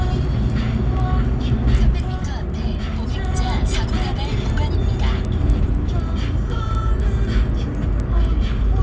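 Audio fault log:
throughout, resampler restarted on every block: the 48 kHz to 16 kHz conversion was run afresh on each 250 ms block, so every block edge was filtered against missing neighbouring samples, leaving a small error there that is heard as regular ticks at 4 Hz whenever sound is present.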